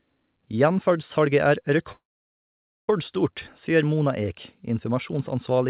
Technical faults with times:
1.92-2.90 call audio freeze

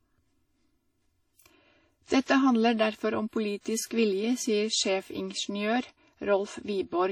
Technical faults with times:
0.00-7.11 channel delay (comb filtering)
0.00-7.11 WMA compression
2.07-2.10 pre-echo
3.60-3.91 pre-echo

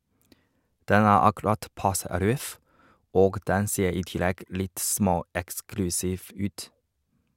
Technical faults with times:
none

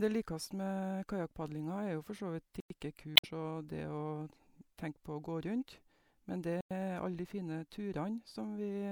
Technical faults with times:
2.60-2.70 gap between chunks
3.16-3.25 damaged data in a compressed stream
6.61-6.71 gap between chunks

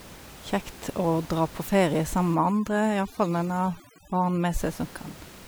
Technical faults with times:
2.35-4.60 overdone noise removal

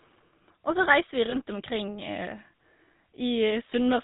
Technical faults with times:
0.00-4.03 GSM full-rate codec
1.30-1.36 lost GSM frames
3.70-3.73 lost GSM frames

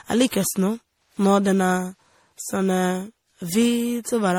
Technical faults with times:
0.00-4.38 generation loss

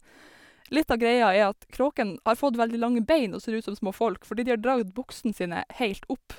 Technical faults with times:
none

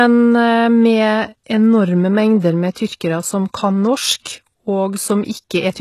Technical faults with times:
0.00-5.81 HE-AAC compression
2.73-2.76 pre-echo
4.21-4.26 pre-echo

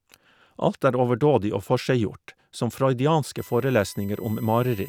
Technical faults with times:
3.38-4.89 USB whine

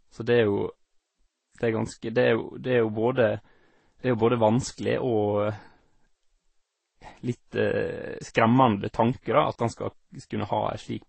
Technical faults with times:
0.00-11.08 transcoding between lossy codecs

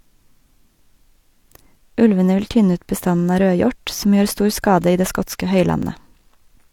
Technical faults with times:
0.79 overlapping chunks
1.80 overlapping chunks
2.81 overlapping chunks
3.81 overlapping chunks
4.82 overlapping chunks
5.83 overlapping chunks

